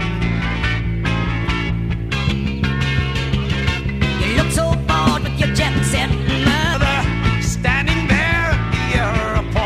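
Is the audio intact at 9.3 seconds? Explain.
Yes, at 9.3 seconds the audio plays through cleanly with no dropout, click, distortion or other fault.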